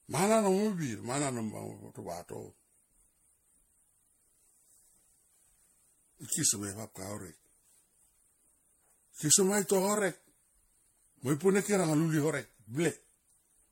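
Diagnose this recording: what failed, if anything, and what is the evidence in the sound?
The failure sits at the codec stage, and generation loss is the likely cause: the speech sounds swirly, hollow and smeared throughout, with consonant attacks blurred. That fits several passes, perhaps around five, through a 64 kbit/s MP3 chain, each re-quantising on a shifted frame grid so the noise and spectral holes accumulate. A spectrogram would show a hard ceiling at 16.5 kHz, flickering spectral holes across the upper bands, and onsets smeared in time rather than sharp vertical edges.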